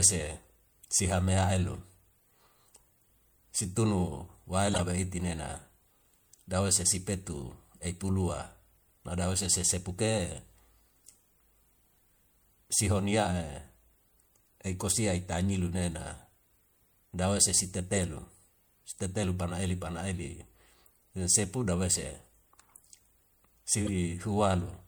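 Corrupt frame decoded at 4.71 to 4.80 s, 17.93 to 17.98 s and 23.85 to 23.89 s: damaged compressed frames in this speech were played as if valid. Misread gains and codes put energy at the wrong frequencies, giving short chirpy, noisy blips. The first, longest burst spans a few frames and peaks around -15 dBFS. The later two are briefer, covering two or three frames, and quieter, near -20 and -25 dBFS.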